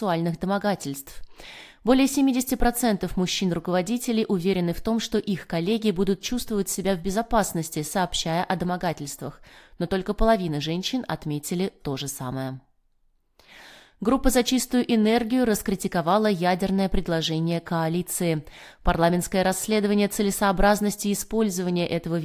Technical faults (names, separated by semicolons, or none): none